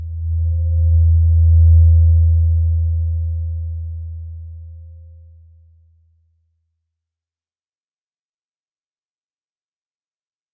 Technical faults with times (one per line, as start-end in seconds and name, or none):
none